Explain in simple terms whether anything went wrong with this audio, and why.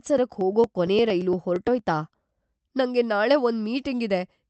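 Periodic USB or driver dropouts affect the speech from 0.07 to 1.79 s. About every 0.115 s, roughly 10 ms of sound is skipped. That produces about fifteen evenly spaced ticks. Something on the computer briefly stalled the audio connection on a regular beat.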